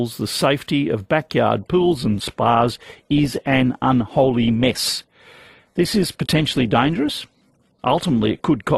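At 1.73 s the speech switches abruptly, with no gap, to an adaptive stream at a lower bitrate and stays there to the end. The player has dropped to a leaner encoding, which sounds like a step from about 64 kbit/s Opus down to about 16 kbit/s. The treble is duller, and codec artefacts become audible. On a spectrogram, energy above 12.3 kHz vanishes at that instant, leaving a flat ceiling, while the waveform continues unbroken.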